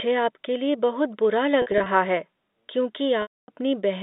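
Packet loss with pitch repetition at 1.62 to 1.86 s: scattered gaps up to 40 ms are bridged by repeating the last pitch period, giving buzzy held sound. At 3.22 to 3.48 s, about 260 ms is lost, so the repetition fades to silence before the sound cross-fades back.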